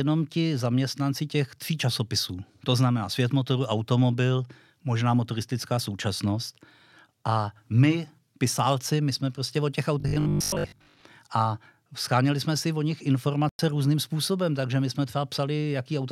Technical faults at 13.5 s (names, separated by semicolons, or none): Bluetooth stall